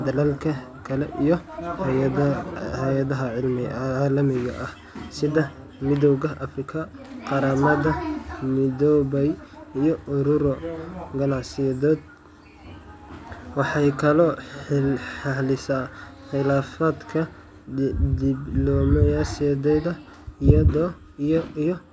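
Speech recording, with no audible technical fault anywhere in the clip.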